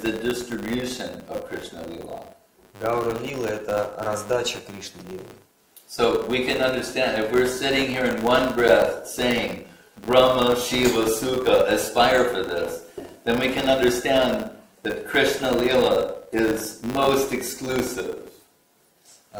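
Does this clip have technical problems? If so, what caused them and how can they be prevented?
Yes. A filter restarted on every block causes a 100 Hz buzz throughout. Each block starts from silence with a small transient. Carry filter state between blocks.

A block of digital silence at 17.05 s leaves a 0.69 ms gap, heard as a tick or dip. The output buffer was likely not filled in time. Give processing more headroom or a larger buffer.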